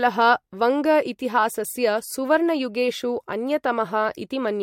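No technical faults are audible.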